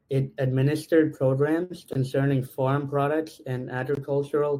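A speech clip with two kinds of fault. At 1.63 s there is a short stall from a late packet. The sound is held and stretched for about 66 ms, until 1.72 s. Then it carries on from the same point, and nothing is lost. Delivery simply falls 66 ms behind. There are gaps between chunks at 1.93 s, just before "farm products and", and at 3.95 s, just after "farm products and". Each is a 20 ms hole. They come 2 s apart, which fits audio handled in 2-second chunks with silence left at each join.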